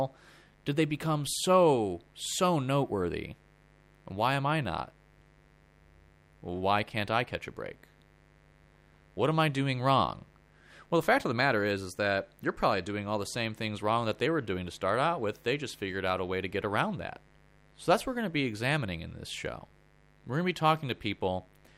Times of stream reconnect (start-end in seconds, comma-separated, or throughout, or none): none